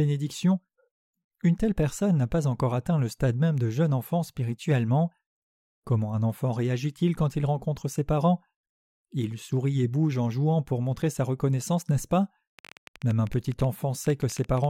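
From 12.59 to 14.65 s a train of clicks, around thirty irregularly spaced pops at about 11.7 per second, ticks over the speech, peaking a few dB above it. The likely cause is interference or a faulty connection or power supply. The waveform shows sharp repeated spikes, and the spectrogram shows thin vertical broadband lines.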